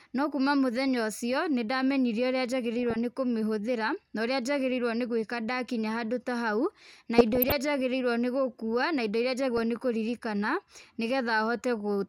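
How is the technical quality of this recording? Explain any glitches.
The speech is marred by DAB burbling in four places: a brief blip at 0.94 s, then bursts from 2.79 to 2.96 s, 7.18 to 7.52 s and 9.57 to 9.63 s. Weak reception let a few tenths of a percent of bits slip past error correction into the MP2 data, so corrupted samples put short noise blips into individual sub-bands and corrupted scale factors make sub-bands leap in level for up to a frame.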